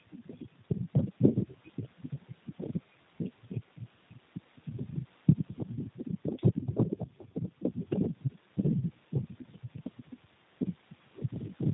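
Speech throughout carries plainly audible G.729 codec damage, which fits an 8 kbit/s setting: nothing above 4 kHz, and a rough, synthetic buzz from pulse-built excitation, unlike a plain low-pass filter's clean dullness.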